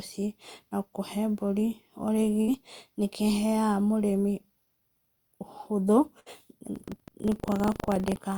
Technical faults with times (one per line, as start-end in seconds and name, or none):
2.41-2.51 burst of packet loss
6.20-6.29 burst of packet loss
6.72-8.19 buffer tearing